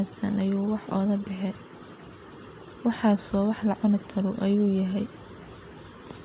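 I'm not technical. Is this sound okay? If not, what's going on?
Yes, nothing here needs worrying about: the speech came through an ordinary call connection, which simply leaves out everything above 4 kHz, and that is just how this kind of call line normally works.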